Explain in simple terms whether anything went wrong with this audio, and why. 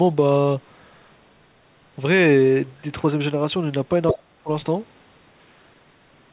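At 4.09 to 4.23 s, a short, fairly loud scrap of a second voice slips in. That is the other side's voice leaking through, likely because the echo canceller missed some loudspeaker sound.

Overlapping it, from 4.13 to 4.49 s, the main speech sinks almost to silence for under half a second. This is speech suppressed in double talk: the main voice itself is pushed down, rather than an extra voice being added.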